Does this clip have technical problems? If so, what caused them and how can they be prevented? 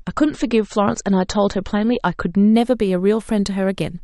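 Yes. An adaptive stream starting at a low bitrate affects the speech from 0.00 to 2.54 s. For those first seconds the player used a low-quality version of the stream so it could begin quickly. Nothing is present above 8.4 kHz, the speech sounds dull, and coding artefacts are stronger, which fits MP3 at about 34 kbit/s. At 2.54 s the treble returns at once with no gap, consistent with a switch to a 128 kbit/s version. Setting the player to start on a higher rendition or buffer briefly before playback prevents this.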